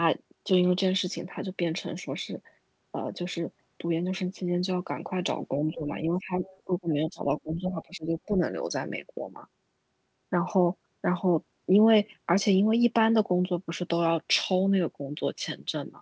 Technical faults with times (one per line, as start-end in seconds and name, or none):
5.67-6.34 speech suppressed in double talk
6.45-6.61 other side's voice leaking through
6.65-8.40 speech suppressed in double talk